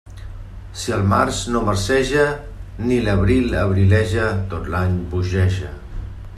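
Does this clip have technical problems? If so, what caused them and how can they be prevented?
No technical faults are audible.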